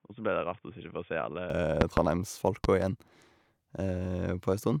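Input switched to a poorer device, 0.0 to 1.5 s: the opening speech is band-limited, with nothing above 3.6 kHz, quieter by roughly 10 dB, and carries a faint new noise floor, likely from a lower-grade microphone or headset profile, before clearing abruptly without any gap.

Loud pop, 1.81 to 2.00 s and again 2.64 to 2.85 s: each is a double pop, peaking roughly 20 dB and then 15 dB above the speech, which continues underneath. These likely come from sudden voltage pulses from a connector, switch or static discharge.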